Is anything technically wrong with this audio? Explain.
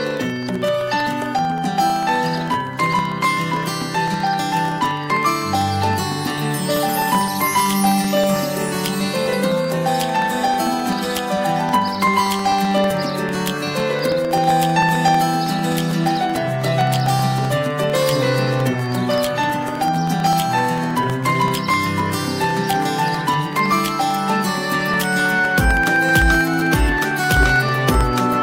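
Yes. From 0.11 s to 28.33 s, periodic USB or driver dropouts recur every 0.064 s: a blocked bus replaces a fraction of a millisecond with silence, giving steady ticks under the signal.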